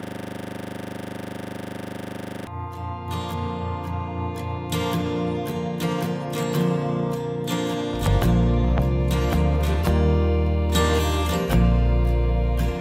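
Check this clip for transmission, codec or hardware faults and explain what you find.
One hardware fault is present. A system hang loop runs from the start until 2.47 s. The system froze while the sound hardware kept replaying the same 40 ms of its buffer, so a rough 25 Hz buzzing stutter repeats about 60 times.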